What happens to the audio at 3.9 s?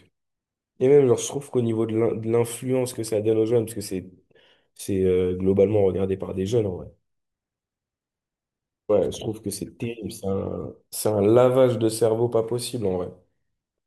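Nothing goes wrong at 3.9 s: the speech there carries on intact, with no dropout, click or distortion.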